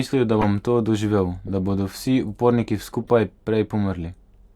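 At 0.39 to 0.45 s, just before "to doživel da bodo", a corrupt frame decoded gives a loud chirp-like burst: flipped bits sent the decoder wrong gains and codes, scattering energy across a few frames. It peaks around -5 dBFS. Softer repeats follow at 1.47 to 1.52 s, after "to doživel", and a faint blip at 3.03 to 3.10 s after "da bodo vsi uporniki". On a spectrogram each appears as a short, misplaced block of energy; the waveform shows brief spikes.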